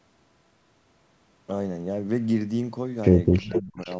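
From 3.39 to 3.89 s the speech dips and breaks up, losing up to about 20 dB across roughly 0.4 s. This is speech suppressed in double talk. The likely cause is an echo canceller that heard both sides at once and turned everything down.

Echo leak appears at 3.54 to 3.61 s and again at 3.79 to 3.96 s. A copy of the speech returns about 403 ms late. The first scrap sits fairly close in level, about 10 dB below. The second is faint, near 30 dB down.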